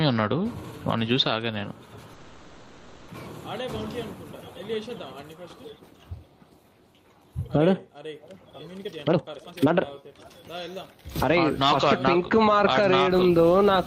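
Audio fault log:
2.13–3.10 s, call audio freeze: The sound stops progressing and the last instant is stretched into a buzzing, hissy continuation that fades but never drops to silence, lasting about 0.95 s. Then the audio picks up exactly where it left off, so nothing is skipped. Instead, a gap of roughly a second has been inserted, and everything after it plays that much later. The likely cause is delayed packets leaving the jitter buffer empty, with the receiver filling the wait.
8.83–11.02 s, jitter buffer speed-up: For just over two seconds the audio runs at about 142% of normal speed while the pitch stays the same, so it sounds rushed and crowded together. The receiver had more buffered audio than it wanted, as happens after a burst of late packets arrives at once. It worked the backlog down by repeatedly cutting out tiny slices a pitch period or so long, removing about a second of material in total.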